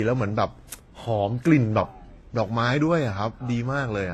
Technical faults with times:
0.00-4.13 transcoding between lossy codecs

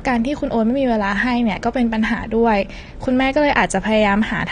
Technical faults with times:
0.00-4.51 AAC compression

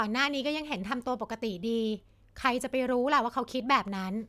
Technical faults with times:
none

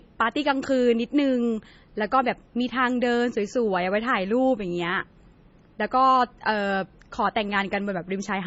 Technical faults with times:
0.00-8.46 low-bitrate audio saved at a high bitrate

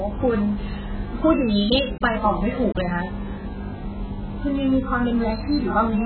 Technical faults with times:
0.00-6.05 AAC compression

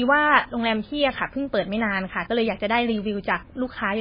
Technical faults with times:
0.00-4.01 MP3 compression

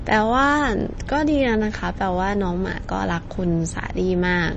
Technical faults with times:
0.00-4.57 MP3 compression

